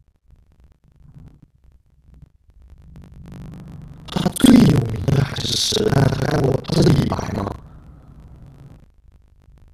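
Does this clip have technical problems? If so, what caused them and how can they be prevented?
Yes. The speech carries buffer tearing from start to finish, a robotic rattle at 25 Hz, which fits a buffer period of 40 ms. The writing program and the playback hardware have drifted so they cross partway through each period, leaving roughly half of every buffer filled with audio about 70 ms stale, hard-joined on both sides. Unlike dropouts or crackle, the rattle is steady, locked to that rate, and vanishes whenever the signal stops. Prevent it by keeping the writer a safe margin ahead of the read pointer, with larger buffers or proper pointer synchronisation.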